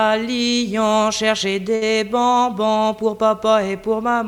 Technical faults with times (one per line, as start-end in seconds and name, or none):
1.75-1.83 burst of packet loss